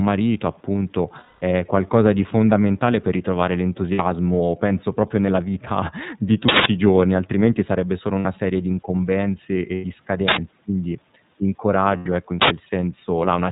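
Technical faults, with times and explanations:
Throughout, iLBC codec: band-limited below 4 kHz, slightly rough and synthetic; 30 ms frames coded independently at 13.33 kbps, narrowband VoIP coding.
1.19–1.41 s, 3.92 s, 8.19 s, 9.75–9.86 s, 11.97–12.07 s, lost iLBC frames: held buzzy, breathy vowel-like sound, longest first (210 ms), others 60–90 ms; decoder repeats last pitch cycle with noise, recovering almost immediately.
6.49–6.66 s, 10.28–10.37 s, 12.42–12.50 s, uninitialised buffer: sudden loud bursts of digital noise, 170 ms then 85 ms twice; leftover memory played as samples, fitting 8192- and 4096-sample blocks.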